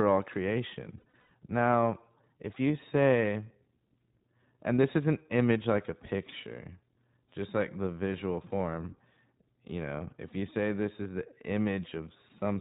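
The whole speech clip runs through the iLBC codec. Everything above 4 kHz is gone, and there's that clear but slightly rough, synthetic edge you get when each frame's excitation is coded on its own. The damage is plainly audible, and the character fits iLBC's 20 ms, 15.2 kbps mode.

Just after "all creation", from 0.98 to 1.30 s, there are lost iLBC frames. About 200 ms of audio drops out in bursts scattered over that third of a second, the longest lasting around a tenth of a second. The decoder fills each gap by repeating the last pitch cycle with some noise, so you hear brief held, buzzy vowel sounds. Since iLBC frames stand alone, the voice snaps back right after.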